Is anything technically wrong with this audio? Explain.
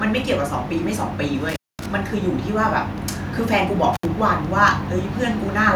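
Yes, there is an intermittent contact fault in this speech recording. A loose cable or plug briefly lost its connection twice, between 1.49 and 1.86 s, where the line stayed open for about 230 ms, and between 3.93 and 4.05 s, open for about 68 ms. Each time the signal path broke, the speech dropped out abruptly, with crackle as the contact scraped apart and back together, and faint hiss remained during the gap.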